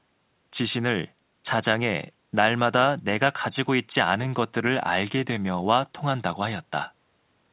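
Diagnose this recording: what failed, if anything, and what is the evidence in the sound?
Nothing stood out on listening to this speech recording, whose content stops at 4 kHz as expected from a narrowband call path such as G.711 A-law at 64 kbps.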